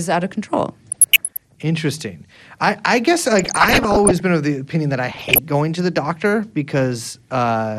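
Right from the start the whole clip has a dull, gurgling, grainy quality, plainly audible, likely from MP2 compression at a rate that fits around 80 kbps. Layer II is starving its 32 sub-bands of bits, so upper bands drop out and flicker while the rest are coarsely quantised.

On top of that there's DAB burbling at 0.90 to 1.56 s, 3.39 to 4.20 s and 5.12 to 5.39 s, pointing to bit error rates of around 1, 0.7 and 1.5 percent. Errors slipping past the error correction either spray noise blips into single sub-bands or jump a band's level for up to a frame.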